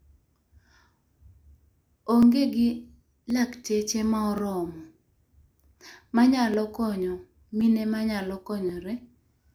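From 1.15 s to 8.69 s the speech carries a click about every 1.08 s, roughly seven in all, each a slip of a few tens of samples. This is likely clock drift buffer slips, from two clocks disagreeing by several hundred ppm. The strict regular spacing sets it apart from random dropouts.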